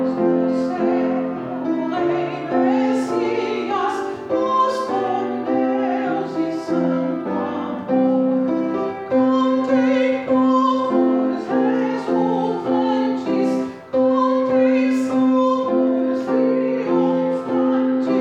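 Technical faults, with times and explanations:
No technical faults found anywhere in the audio.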